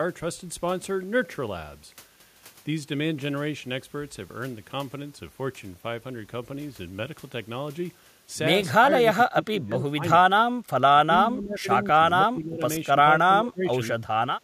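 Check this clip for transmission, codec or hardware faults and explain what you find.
One fault runs through the latter part of the speech: speech suppressed in double talk, in seven stretches at 8.81–10.02, 10.33–10.57, 10.95–11.68, 11.93–12.00, 12.16–12.62, 12.91–13.07 and 13.23–13.73 s. The likely cause is an echo canceller that treated overlapping far-end talk as echo and attenuated everything. The voice dips and breaks up in pieces, falling by about 20 dB at its deepest.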